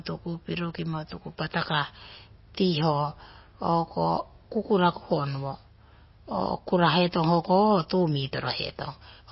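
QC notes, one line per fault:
throughout, MP3 compression: speech sounds watery and swirly, likely from an encode around 24 kbps; the spectrogram shows a flat ceiling at 5.6 kHz with flickering holes.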